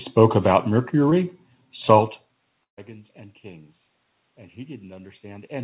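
At 1.10 s the speech briefly smears for about 30 ms. This is short concealed packet loss. Around 20 ms of the call arrived too late for the decoder. The receiver covered the hole by extending the sound just before it, then blended back into the real signal. The patch is tiny. It registers as a quick smear or wobble in the speech, and a brief sound there may be lost.

From 2.63 to 2.79 s there is a burst of packet loss. About 140 ms of audio went missing in one run. The receiver again continued the last sound, but it could not sustain it for that long. The filler fades quickly, and most of the gap, about 120 ms, is close to silent. The speech then picks up further on, and the part in between is gone. This is narrowband call audio with nothing above 4 kHz.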